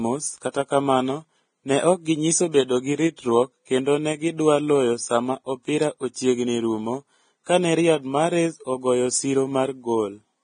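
Throughout, likely Vorbis compression: speech stops at 9.7 kHz, and remaining treble turns to grainy hiss, unlike plain filtering, which leaves dull but clean sound.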